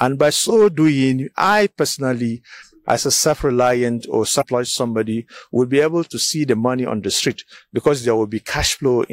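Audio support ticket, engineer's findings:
Damaged data in a compressed stream, 4.38 to 4.44 s. Short glitch, about 60 ms. Probable component: decoder input. Corrupted bytes in the encoded stream leave frames unreadable, so the decoder loses frame sync and resumes at the next valid header.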